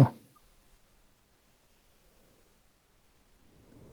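No technical faults can be heard anywhere in the speech recording. Nothing needs placing on a timeline, since no event stands out at any point.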